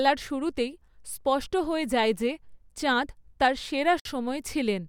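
At 4.00 s the speech breaks off for about 55 ms, until 4.05 s, then resumes exactly where it stopped. This is a gap at a join of encoded pieces: separately encoded segments were spliced untrimmed, leaving encoder delay and end padding as silence with slightly smeared edges.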